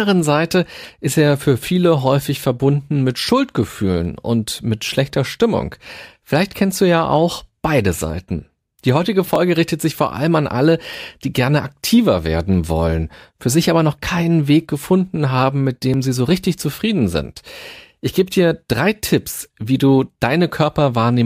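A likely dropped buffer (overrun) hits this speech clip twice: the recording software fell behind, and the hardware overwrote audio it had not yet collected, so a few milliseconds vanish and the surrounding audio is spliced directly together with no gap. Each loss is heard as a jump in the sound, first at 9.36 s just before "richtet sich vor allem", then at 15.94 s between "gefunden haben mit" and "sie so richtig zufrieden".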